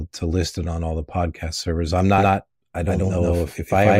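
A second capture path, likely running slower, feeds the same speech back into the mix from 2.18 s, just after "the podcast servers I'm", to the end: a doubled audio track, with an equally loud, dry copy trailing by about 150 ms, starting abruptly.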